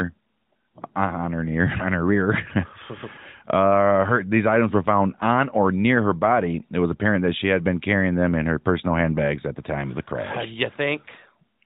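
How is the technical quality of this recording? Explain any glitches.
No glitches are audible in the speech; its narrowband sound, with nothing above 4 kHz and only light coding coloration, is that of the AMR narrowband mobile codec working normally, which fits its 12.2 kbps mode.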